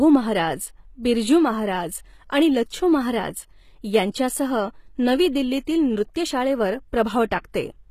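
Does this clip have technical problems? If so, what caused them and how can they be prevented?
Yes, throughout the whole clip the speech carries plainly audible codec damage, likely from HE-AAC compression at a low rate, which fits something around 20 kbps. The upper range sounds synthetic: only the lower spectrum is really coded, and the treble is patched in by copying lower bands upward under a rough envelope, so the top end doesn't match the original. There's nothing at all above 14.9 kHz. To prevent it, encode at a higher bitrate or use plain AAC or a lossless format.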